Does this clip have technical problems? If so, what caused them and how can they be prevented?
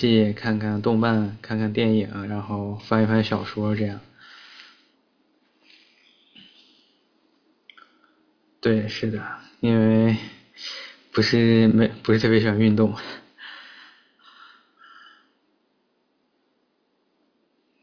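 No, there are no audible technical faults in this speech clip, so there is nothing to trace or prevent.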